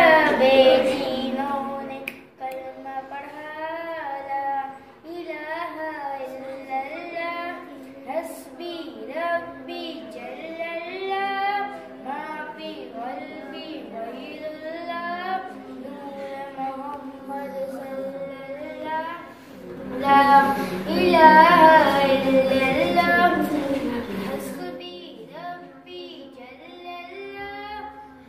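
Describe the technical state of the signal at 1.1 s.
At 1.1 s the level is falling through zipper noise, 0.98 to 2.25 s: unsmoothed 2 dB steps, about five per second, tick audibly across a drop of about 15 dB.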